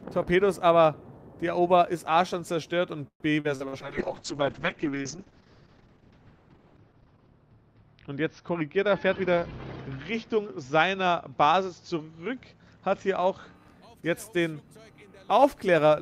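From 3.07 to 3.75 s there's repeated packet loss with that robotic sound: four holes close together, the longest 127 ms. The receiver kept stretching the last bit of audio to cover each one, so about a third of that stretch is patched and choppy.

Right after, at 3.83 s, a call bitrate drop sets in and runs until 13.61 s. The top end collapses from 20 kHz down to 6 kHz and everything turns muffled and watery, which fits the encoder being squeezed from about 48 kbps to something like 6 kbps. It sits at its worst for about 3.5 s.

Inside that, from 8.54 to 9.65 s, there's a jitter buffer speed-up. The buffer had too much audio queued, so it trimmed short pitch-length slices, around 150 ms in total. The sound plays roughly 11% faster at unchanged pitch and comes across a bit rushed.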